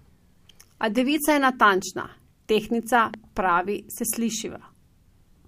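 From 3.14 to 3.39 s, after "devica je natančna tehtnica", two loud pops land over the speech, a little above its level. A likely voltage spike, perhaps static or a switch, caused them.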